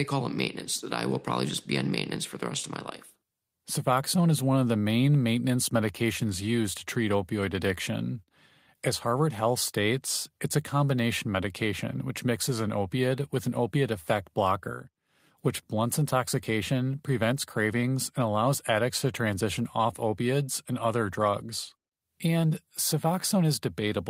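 No technical faults can be heard anywhere in this speech recording. There is no moment in it that calls for a time or a value to be marked.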